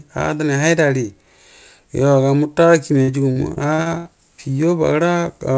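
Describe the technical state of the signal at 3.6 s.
At 3.6 s the signal sits inside a stretch of repeated packet loss (robotic sound) running from 3.02 to 4.07 s. Audio keeps dropping out in short holes, the longest about 74 ms, and each is patched by extending the last sound, so about a quarter of the span is synthetic fill. The speech turns choppy, with pieces missing. On a waveform, copied cycles repeat with abrupt joins. On a spectrogram, harmonics flatten into horizontal smears below the 8 kHz G.722 ceiling.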